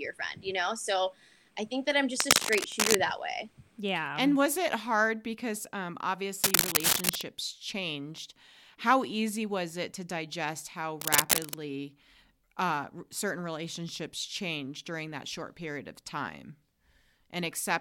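Three bursts of cable scratch noise break into this speech, at 2.18 to 2.97 s right after "I think that I'm" (the speech picks up again at "that way"), at 6.42 to 7.21 s after "it hard because um", and at 11.00 to 11.55 s after "it to digest how". Each is a dense, uneven scratchy rustle sitting a little above the speech. That's likely a worn cable or connector being moved, its contact resistance jumping around.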